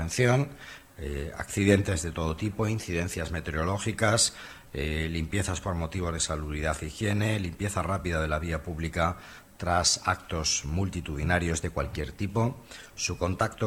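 Clock drift between sender and receiver runs throughout: the sender's clock is about one and a half percent slower than the receiver's, so the jitter buffer keeps draining and the receiver must keep filling time to avoid running dry, leaving the timing faintly unsteady.

From 0.21 s to 13.31 s come repeated timing corrections: the receiver keeps repeating short pieces, all in the same direction and at uneven spacing, adding roughly a fifth of a second overall. The audio plays at 98% speed, heard as slight hiccups and a wavering tempo.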